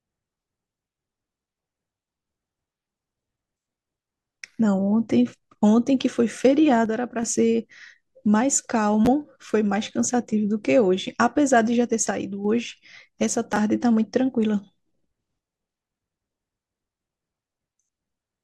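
At 6.86–7.23 s and again at 12.11–12.45 s, the level falls abruptly by about 6 dB and then snaps back, likely one channel dropping out. The drop is a clean step rather than a fade. At 9.05–9.07 s and 13.53–13.57 s, chunks play out of order: 10 ms pieces arrive one and then three chunks late. This causes jumbled moments, but no audio is missing.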